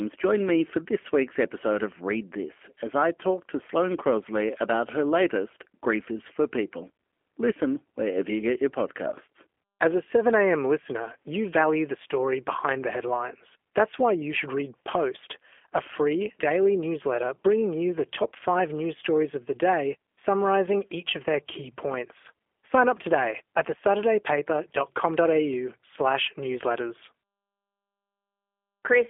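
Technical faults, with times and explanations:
Throughout, G.729 codec: speech rebuilt from a vocal tract filter and sparse pulses sounds plainly rough and synthetic, with nothing above 3.6 kHz, consistent with 8 kbit/s.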